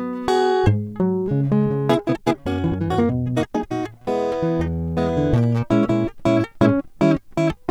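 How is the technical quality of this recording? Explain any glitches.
There's one clear glitch in this music clip. From 1.9 to 3.72 s you get a time-stretched section: the music suddenly runs at roughly double pace, about 1.99 times normal speed, yet the pitch doesn't budge. That's most likely software squeezing the passage to fit a shorter slot, holding pitch by throwing away short slices of audio as it goes. The result sounds rushed, and then it snaps back to normal pace.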